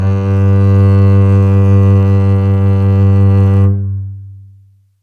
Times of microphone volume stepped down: none

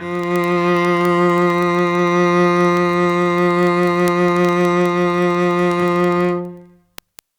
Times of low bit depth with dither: none

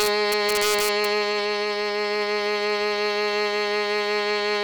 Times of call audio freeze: none

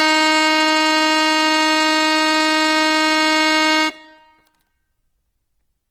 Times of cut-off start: none

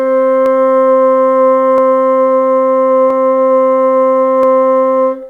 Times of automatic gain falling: none

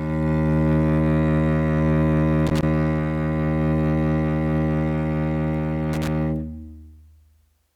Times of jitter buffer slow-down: none

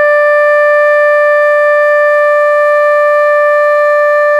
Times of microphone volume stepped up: none

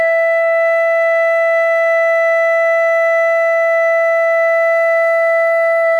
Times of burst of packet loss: none

